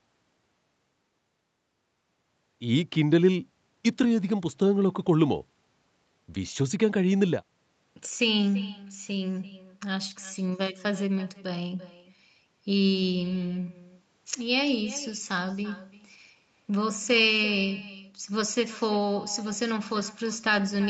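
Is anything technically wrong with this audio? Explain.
Yes. Throughout the speech, every phrase is followed by a faint, thin copy of itself about a third of a second later, sitting roughly 18 dB below the direct sound. This is echo with no canceller: the far end played the call over a loudspeaker, its microphone caught that playback, and nothing subtracted it before sending it back, so the talker's own voice returns after the network round trip. The top end stopping at 8 kHz comes from the call path's bandwidth limit and is expected.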